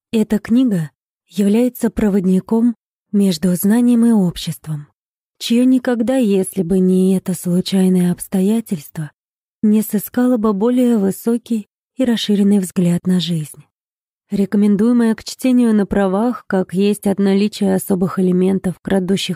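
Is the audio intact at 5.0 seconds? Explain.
Yes, the audio at 5.0 seconds is intact, with no dropout, click, distortion or other fault at that moment.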